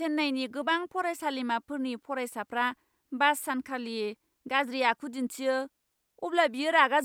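Nothing in this recording gives itself away as a technical fault: there are no dropouts, glitches or other audible problems to point to anywhere along the way.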